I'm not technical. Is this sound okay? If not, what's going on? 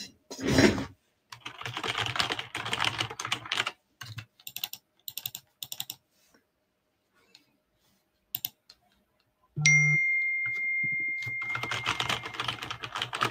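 No. A noise suppressor meant for speech was applied to these sounds, so it treats steady tones and fading tails as noise, making the level pump and thin out.

The sound cut by the noise suppressor drops out noticeably at 0.07–0.32, 0.89–1.45, 3.73–4.01, 4.25–4.52, 4.76–5.12, 5.39–5.64, and longest from 5.92 to 9.57 seconds.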